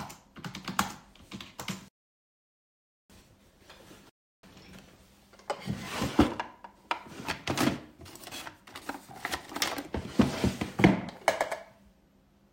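At 1.88 s the audio drops to silence for 1.21 s, resuming at 3.10 s; a shorter gap follows from 4.10 to 4.43 s, adding 0.34 s. Each is a rebuffering stall: playback drained its buffer and waited, then continued from the exact point, losing nothing.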